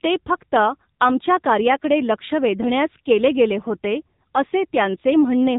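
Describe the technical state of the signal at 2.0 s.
Buzzy, synthetic and band-limited, with nothing above 3.8 kHz: AMR narrowband mobile codec damage runs throughout, its pulse-driven vocal-tract model pointing to a low mode near 8 kbps.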